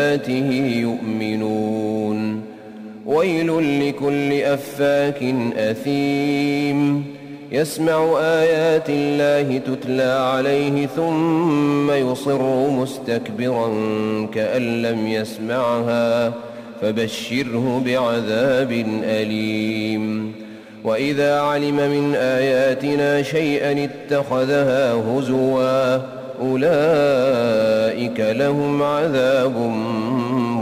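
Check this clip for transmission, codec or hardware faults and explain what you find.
One fault runs through the whole clip: crude rate conversion. The sample rate was changed by simply dropping the nearest samples, with no anti-alias filter, which fits a conversion from 48 kHz to 44.1 kHz. The uneven skipping follows a fixed repeating pattern and leaves error roughly 30 dB below the signal, heard as a gritty, inharmonic fizz that tracks the loud and bright moments of the sound.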